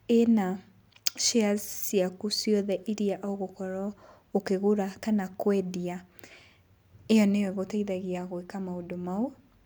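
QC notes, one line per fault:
Nothing to flag here; no faults turn up anywhere in the speech.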